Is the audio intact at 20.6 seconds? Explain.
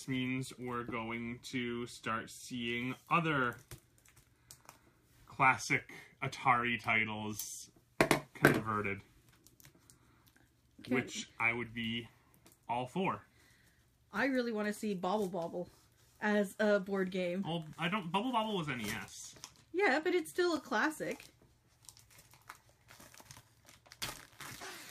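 No. A block of digital silence at 20.56 s zeroes about 5 ms of samples, heard as a tick; the waveform shows a flat gap, the spectrogram a broadband click at each edge.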